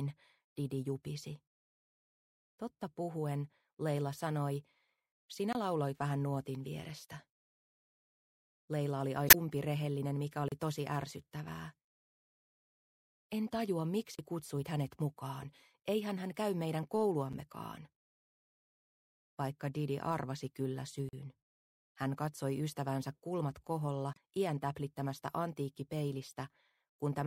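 At 5.53 to 5.55 s the audio drops into a block of digital silence. The 23 ms gap fits a 1024-sample buffer that was not filled in time. The output falls silent and returns with no fade. At 9.26 to 9.35 s there is damaged data in the compressed stream. The decoder misreads corrupt frames, loses sync and hunts for the next valid header. It is heard as a brief glitch. More blocks of digital silence follow. They are at 10.48 to 10.52 s and 14.15 to 14.19 s, both 35 ms, then at 17.33 s, about 7 ms. Another comes at 21.09 to 21.13 s, 41 ms, and at 23.67 s, about 5 ms. The longer ones sound like short holes. The two shortest are little more than ticks. At 24.12 to 24.17 s, damaged stream data returns as a second short glitch.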